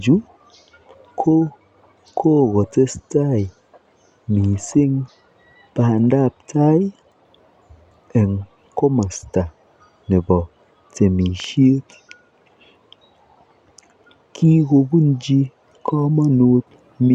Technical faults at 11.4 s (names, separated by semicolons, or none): loud pop